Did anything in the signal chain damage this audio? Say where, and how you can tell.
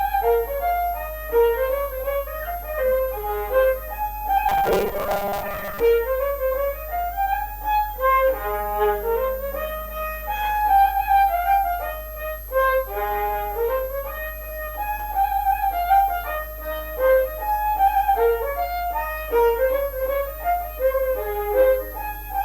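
Yes. A high, thin whistle sits under the sound for the whole clip. Its pitch wanders between about 11.9 kHz and 14.3 kHz and stays well below the programme, roughly 20 dB down. That drifting tone is a switching supply whistle. It enters in the analogue wiring or power stage, where a switch-mode supply runs in an audible burst mode or beats against another supply. As its load shifts, the whistle frequency moves with it.

From 4.49 s to 5.80 s the sound turns rigid and metallic, with a steady buzz near 200 Hz laid over it that roughly follows the underlying sound. This is robotic sound from repeated short buffers, likely caused at the driver or buffer stage. Audio arrived too slowly, so the last short chunk was looped to fill the gap while the real material was skipped. Around half the audio in that stretch is repeats. A 200 Hz buzz fits 5 ms chunks being replayed back to back.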